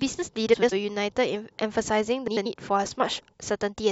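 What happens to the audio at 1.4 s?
Nothing goes wrong at 1.4 s: the speech runs through that moment intact, with no dropout, click, glitch or other fault to be heard.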